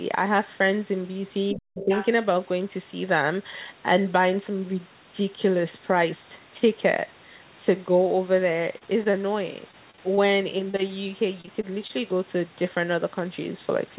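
Speech, band-limited to nothing above 4 kHz, as narrowband G.711 would give. From 1.52 to 1.9 s the talker's level falls by roughly 40 dB for about 0.4 s, likely speech suppressed in double talk as an echo canceller ducks both voices. Unlike packet loss, the dip is a level drop, not a patched gap. Overlapping it, from 1.8 to 2.07 s, a second voice comes through about 10 dB below the talker: likely the other side's voice leaking through from the loudspeaker. It is a distinct, quieter talker, not an artefact of the main voice. Repeated packet loss (robotic sound) appears from 8.78 to 9.3 s, 9.71 to 10.19 s and 11.41 to 11.91 s. In each stretch several holes up to about 27 ms long are filled by stretching the previous sound, covering 16 to 18% of the span, so the speech turns choppy rather than simply dropping out. Between these, at 10.71 to 10.75 s, a single short concealed packet loss of about 20 ms leaves one brief smear. 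It is an isolated glitch, not a run of repeated holes.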